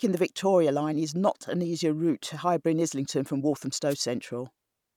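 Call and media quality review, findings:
Wireless microphone noise hit, 3.89–3.96 s: brief swish of static across the speech, about 70 ms. Probable component: analogue FM radio link, mic to receiver. Mechanism: multipath reflections cancel the carrier, the signal fades, and receiver noise rises briefly over the audio before the signal recovers.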